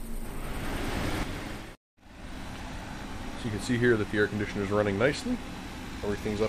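At 1.23 s one channel drops out until the end. Shared sound falls abruptly by about 6 dB, likely because a stereo channel was lost before mono summing.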